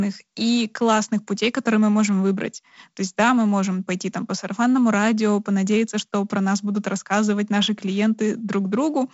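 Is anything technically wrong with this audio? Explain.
No, nothing here sounds technically wrong.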